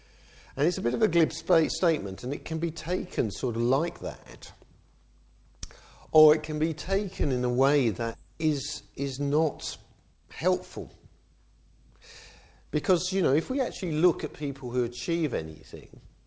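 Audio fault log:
8.14 to 8.16 s, skip ahead: The receiver discarded roughly a second of audio, either lost in transit or dropped by an overflowing jitter buffer, while later audio was already queued. Playback lurches forward with no filler: the sound before and after the missing second are butted together almost seamlessly, so the jump registers as an abrupt discontinuity rather than a silence, and whatever occupied that second simply never arrives.
9.91 to 10.54 s and 12.36 to 14.06 s, jitter buffer speed-up: The jitter buffer was holding more audio than its target, so the receiver repeatedly cut out short pitch-period-sized slices to drain the excess delay. The first run plays at 119% speed, shedding about a seventh of a second; the second, gentler run plays at 106%, shedding about a tenth. Pitch stays put while timing compresses, so both stretches sound rushed, the first noticeably more so.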